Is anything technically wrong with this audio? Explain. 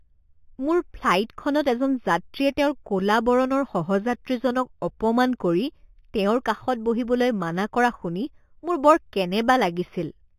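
Yes. Throughout the speech there is imaging from linear upsampling. The audio seems to have been raised from a rate that fits 8 kHz to one that fits 48 kHz by straight-line interpolation, a weak filter that leaves a mirrored spectrum copy from 4 kHz to 8 kHz, roughly 25 dB down. The top end sounds dulled, and sibilants carry a faint metallic shimmer.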